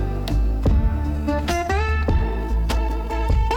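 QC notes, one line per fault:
1.13–3.57 s, time-stretched section: the pace jumps abruptly to about 1.84 times the earlier rate while pitch stays where it was, so the sound turns rushed. This likely comes from software squeezing the passage to fit a shorter length, discarding short slices to keep pitch. On a spectrogram, harmonic spacing is unchanged but events crowd closer together in time.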